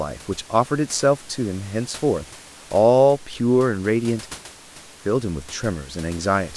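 Nothing stood out on listening to this speech recording, where the only background is the room's own noise, sitting about 22 dB below the speech.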